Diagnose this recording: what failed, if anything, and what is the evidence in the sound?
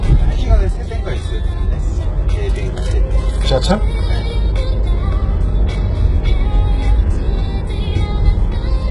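Codec stage: heavy HE-AAC compression throughout, likely near 12 kbps. Treble sounds copied upward from lower bands, gritty and metallic, with nothing above 11.1 kHz.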